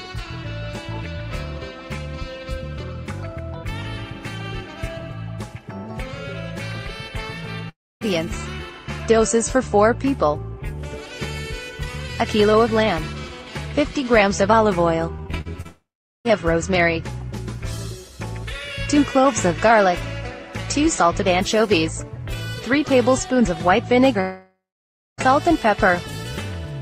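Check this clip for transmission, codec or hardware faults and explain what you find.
There are two transmission problems here, both network-side, and no hardware or codec issues stand out.

The long network dropouts hit at 7.69–8.03 s, 15.67–16.27 s and 24.21–25.28 s. Each time the last sound is stretched into a fading buzz or hiss, then goes quiet for roughly 0.27, 0.41 and 0.59 s before audio resumes. About 0.32, 0.58 and 0.98 s of content is simply gone, likely because packets stopped arriving.

Repeated packet loss (robotic sound) runs from 15.17 to 15.67 s, straight into the second dropout. Six short holes, the longest 42 ms, each get patched by extending the previous sound. About 30% of that half-second is filler, so it comes across choppy.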